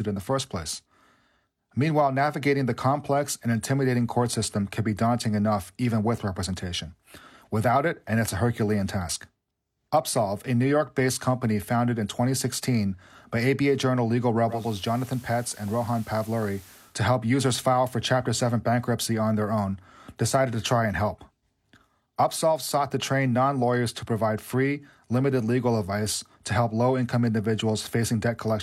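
Speech that, from 14.45 s to 16.98 s, turns briefly hissy and drops about 3 dB in level, sliding into that state over roughly a quarter of a second and back out just before "help users file for". This is digital radio blending to analogue: the hybrid receiver lost the digital stream and cross-faded, in about 0.24 s, to the same station's FM broadcast, whose background hiss sits roughly 25 dB below the speech, then blended back once digital reception recovered.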